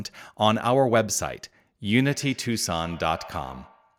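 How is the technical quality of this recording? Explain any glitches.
From 2.09 s to the end at 3.99 s, the speech comes back as a thin, ringing echo roughly every 150 ms, at its loudest about 22 dB below the direct speech. This is feedback echo between two devices: a second device in the same room on the same call plays back this microphone's sound, the microphone picks it up again, and the echo canceller cannot remove audio that another device plays.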